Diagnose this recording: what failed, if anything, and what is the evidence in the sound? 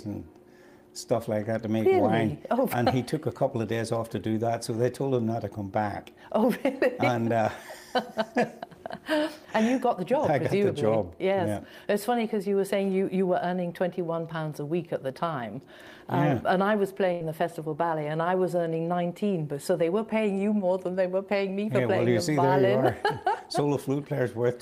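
The network stage dropped out here: a burst of packet loss at 17.12 s, running to about 17.21 s. Listen there and the sound doesn't just cut. The receiver stretches the last bit it got across roughly 80 ms, fading it down as it goes, so you hear a held buzz or a dying hiss. When the audio picks back up, it's jumped ahead, with about 80 ms of the original simply gone.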